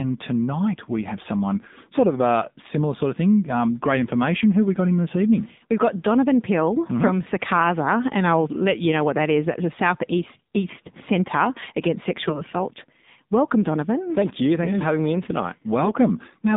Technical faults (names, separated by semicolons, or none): AMR narrowband mobile codec; AMR bit errors